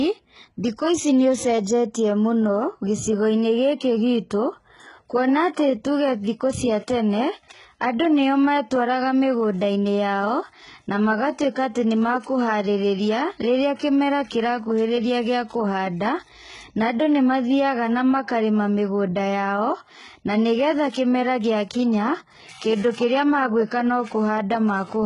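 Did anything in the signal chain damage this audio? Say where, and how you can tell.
Yes. The damage sits at the codec stage and runs through the whole speech clip. There is nothing above 11.1 kHz, and the treble sounds synthetic rather than real. That is likely HE-AAC compression at a very low rate, fitting about 12 kbps, rebuilding the highs by copying lower bands upward.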